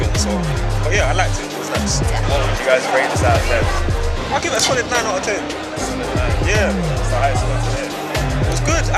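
No technical fault can be heard anywhere in this audio; the signal holds steady throughout, with no interruption, distortion or change in level.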